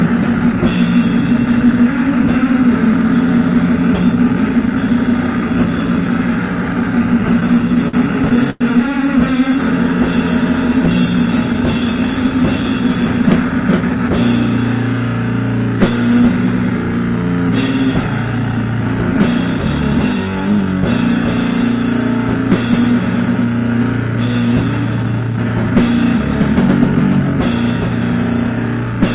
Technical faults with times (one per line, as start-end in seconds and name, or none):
7.21-8.61 repeated stalls (stutter)
10.88-12.16 jitter buffer speed-up
19.16-20.19 jitter buffer speed-up
24.13-25.45 jitter buffer speed-up
27.73-28.85 jitter buffer speed-up